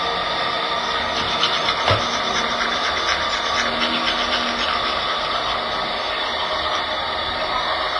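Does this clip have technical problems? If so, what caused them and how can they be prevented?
Yes. Throughout the clip the sound rings and smears, with a washy hiss that swells and fades with the signal. Nothing is heard above 10.6 kHz. This is likely heavy WMA compression, which fits a bitrate near 24 kbps. Encode at a higher bitrate, or keep a lossless copy.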